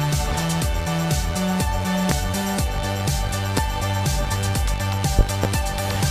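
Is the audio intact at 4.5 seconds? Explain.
Yes, at 4.5 s the audio is intact, with no dropout, click, distortion or other fault at that point.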